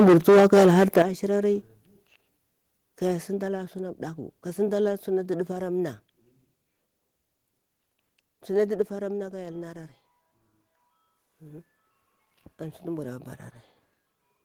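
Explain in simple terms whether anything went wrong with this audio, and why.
For the first second, up to about 1.02 s, the speech sounds harsh and crackly, with the loudest moments flattened and buzzing. This is microphone overload. The microphone's input was likely set too high, so roughly a fifth of the sound hit the converter's limit and had its tops sliced off.

Right after that, at 1.02 s, the whole sound, speech and background together, suddenly gets quieter in one step. Smaller drops follow at 2.04 s, 5.52 s and 8.82 s. This is the microphone volume being stepped down, most likely by the call software reacting to the earlier overload and turning the input down in stages.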